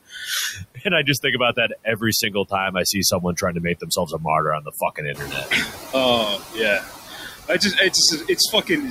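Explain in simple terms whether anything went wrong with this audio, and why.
Yes, several things went wrong, all caused by the noise suppressor, the part of the system that tries to remove background hiss and hum.

Noise suppressor artifacts run through the whole clip. The suppressor keeps guessing which parts of the sound are steady noise and turning those down, many times a second. It cuts the background noise a lot, but not cleanly. The leftover noise dips in the gaps and comes back under the talking. The voice can sound thin or watery.

Speech cut by the noise suppressor happens four times: from 0.07 to 3.43 s, ending just before "to make"; from 3.8 to 4.25 s, just after "to make"; from 4.6 to 5.94 s; and from 7.07 to 8.7 s. In these stretches the suppressor mistook quieter bits of the voice for noise and turned them down along with the background. Only short pieces are affected, under a second in total in the first stretch and around half a second or less in each of the others. 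Soft sounds and word endings come across as swallowed or faint.

Noise suppressor catching up happens between 5.14 and 5.67 s. The room noise gets suddenly louder at around 5 s. That rise is real and comes from the room itself, not from a fault. The suppressor's idea of what the noise sounds like was out of date, so for about half a second the louder background comes through with less cleaning than before. Then it settles down again as the suppressor adjusts.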